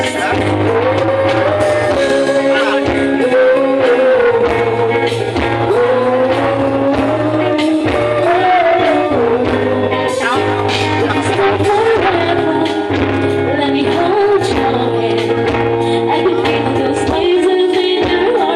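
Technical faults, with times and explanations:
No technical faults are audible.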